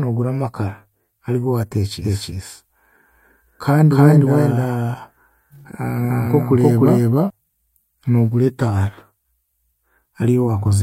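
From about 2.04 s to 7.30 s the speech is heard twice, with a second full-band copy trailing the first by roughly a third of a second at about the same loudness. The echo has no decay or room colour, and it switches on and off abruptly at those points. This is a doubled audio track, likely from the signal being captured a second time through a slower path and mixed back in.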